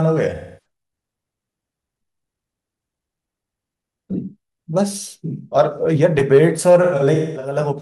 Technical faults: AAC frame loss with concealment

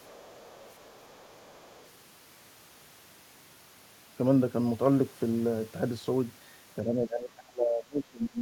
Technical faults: other side's voice leaking through; speech suppressed in double talk

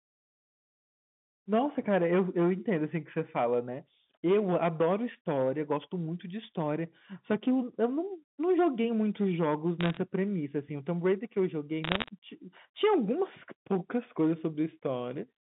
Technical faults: hard clipping; bit errors on a digital phone line

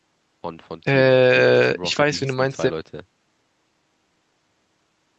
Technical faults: none

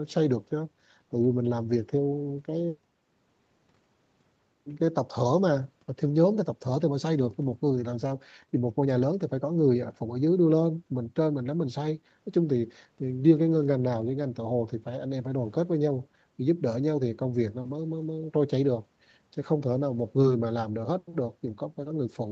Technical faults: none

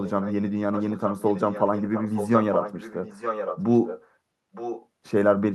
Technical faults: echo leak

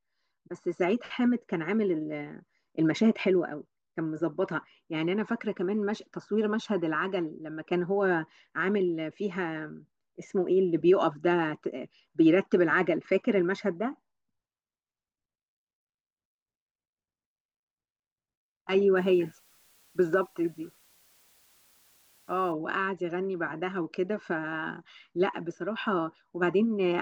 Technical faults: low bit depth with dither

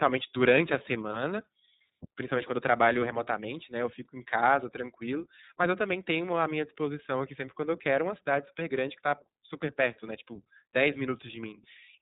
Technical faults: iLBC codec; microphone volume stepped down

